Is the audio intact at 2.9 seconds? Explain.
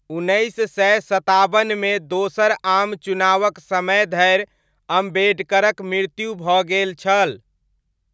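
Yes, the speech at 2.9 seconds is intact, with only the normal call microphone processing, whose high-pass filter trims the lowest bass, and nothing above 8 kHz.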